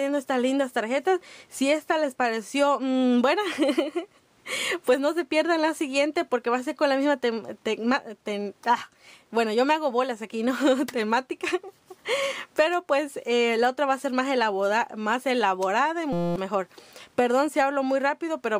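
From 16.13 to 16.36 s, a system hang loop repeats one 5.8 ms slice as a steady 172 Hz buzz rather than a silent dropout, which fits a 256-sample buffer.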